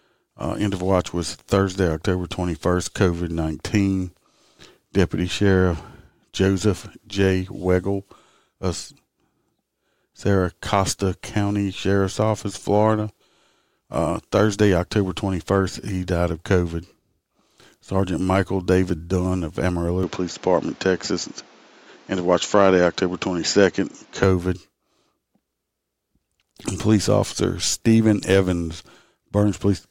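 From 20.03 to 24.24 s the speech dulls, losing everything above 7.6 kHz and gaining faint new noise, likely from the input switching to a poorer device.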